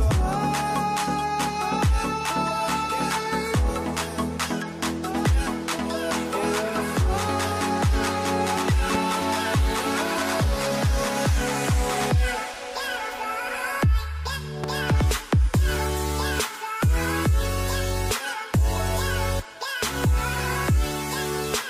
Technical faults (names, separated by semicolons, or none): loud pop